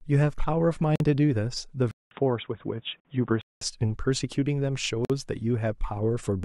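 At 0.96 s the speech drops out for about 45 ms, until 1.00 s. This is a gap at a join of encoded pieces. The audio was encoded in separate chunks, roughly 2 s apart, and joined untrimmed. Each chunk keeps its encoder's start delay and last-frame padding. The result is a hole in the sound with smeared edges. The speech then resumes where it stopped.

From 1.91 s to 3.61 s the input switches to a poorer device, likely a change to another microphone or a headset call profile. The switch opens with about 200 ms of silence. The speech then turns dull and boxy, with nothing above 3.8 kHz. A new background noise appears, roughly 40 dB below the speech. The loudness stays about the same.

The same join gap returns at 3.00 s and at 5.05 s, each about 48 ms long. The first falls inside the dull stretch.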